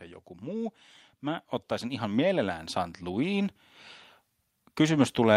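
From 0.05 s to 3.73 s, automatic gain rising: the AGC judged the input too quiet and raised gain by about 11 dB, swelling speech and background together.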